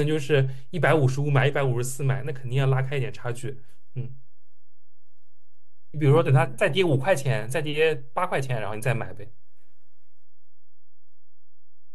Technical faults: DC offset

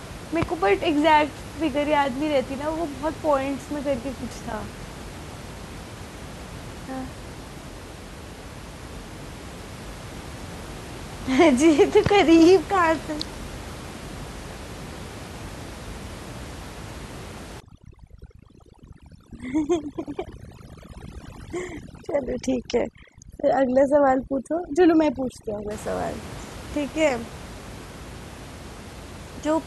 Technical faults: overdone noise removal

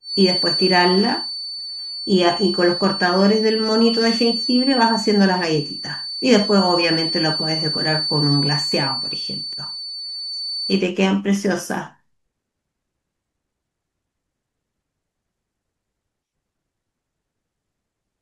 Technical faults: feedback whistle

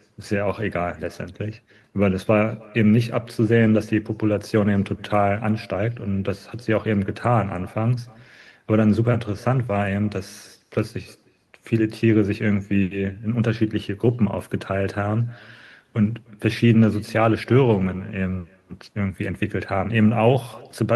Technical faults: echo with no canceller

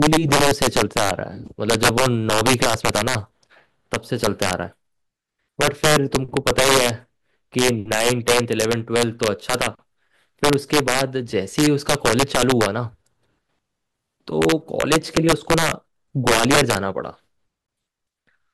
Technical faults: integer overflow; gap at a join of encoded pieces

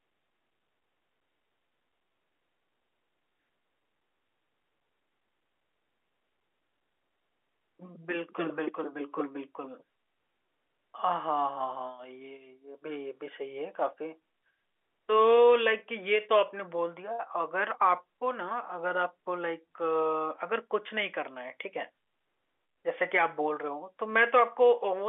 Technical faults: none

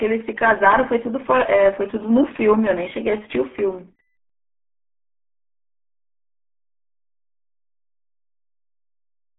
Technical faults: RealAudio 14.4 codec

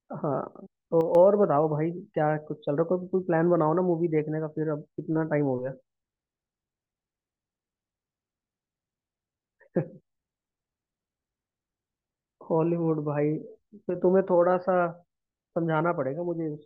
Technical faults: one channel drops out

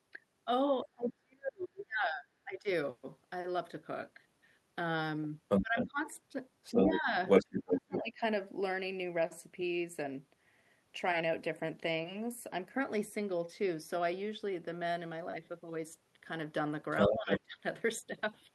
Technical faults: speech suppressed in double talk; other side's voice leaking through

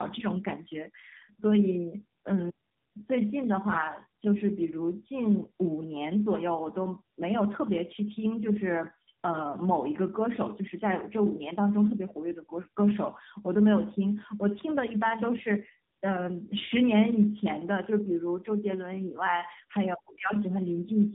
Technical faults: tandem speech coding

